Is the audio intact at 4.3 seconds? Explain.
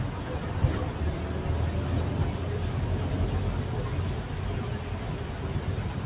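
Yes, at 4.3 seconds the sound is intact, with nothing there beyond the call path's normal band limit, which leaves nothing above 4 kHz.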